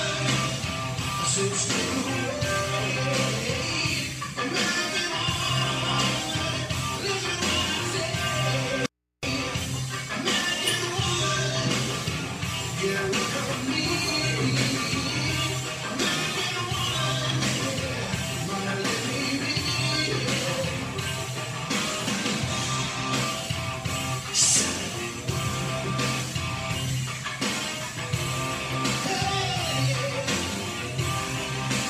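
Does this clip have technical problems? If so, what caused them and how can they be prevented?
Yes. From 8.86 to 9.23 s the sound cuts out abruptly for 0.37 s. Only mains hum remains, roughly 55 dB below the signal. This audio dropout to a faint residue likely came from a loose input connection. Secure cables and connectors firmly before recording.

At 28.73 to 28.75 s a short glitch appears, peaking around -20 dBFS. This is a corrupt frame decoded. Flipped bits put energy at wrong frequencies, which points to a couple of damaged frames. Use error-checked transmission or storage to prevent it.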